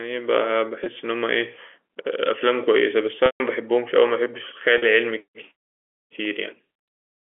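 At 0.84 to 0.86 s the speech briefly holds a slightly buzzy, sustained tone. This is packet loss with pitch repetition: about 20 ms of audio went missing, and the receiver bridged the hole by looping the last pitch period. The longest loss, 3.26 to 3.40 s, runs 140 ms, so the repeated period fades to silence before speech cross-fades back in. At 4.78 to 4.82 s a 40 ms loss produces a short held buzz again.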